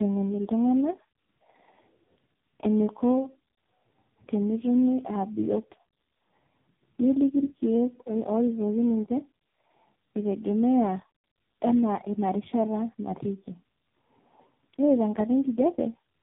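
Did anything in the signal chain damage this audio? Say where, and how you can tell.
Yes, at the codec stage: the speech passed through tandem speech coding across the whole clip, which fits an AMR-NB link, G.726 and a second AMR-NB hop bridged by G.711. Each recoding compounds the last one's damage, leaving rough, warbly, muffled speech with nothing above 3.8 kHz.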